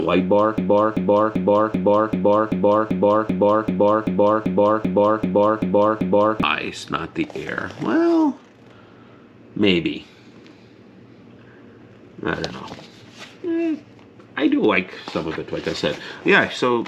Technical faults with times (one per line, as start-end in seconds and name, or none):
0.58-6.43 broken-record loop